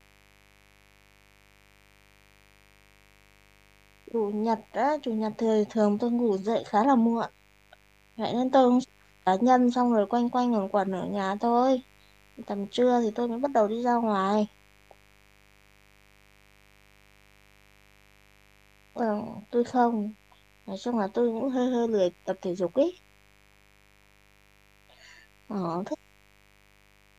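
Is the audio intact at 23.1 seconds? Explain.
No. At 23.1 seconds a mains buzz is present, as it is for the whole clip. Switching spikes from a dimmer, rectifier or poorly shielded cable are getting into the signal path twice per cycle of the 50 Hz supply, stacking up harmonics of 50 Hz that extend into the kilohertz range. Under the speech this comes through as a constant, gritty buzz, sitting roughly 35 dB below the speech.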